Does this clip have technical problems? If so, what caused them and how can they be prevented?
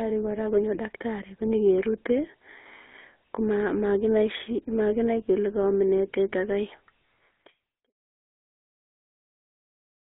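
Yes. GSM full-rate codec damage runs from start to finish: the speech is modelled as a vocal-tract filter driven by sparse, regularly spaced pulses at about 13 kbps, giving a buzzy, gravelly roughness in a band of roughly 250 Hz to 3.4 kHz. The fade-out ending near 7.93 s is a normal edit. Prevent this by recording or sending over a wideband path and not a legacy GSM call.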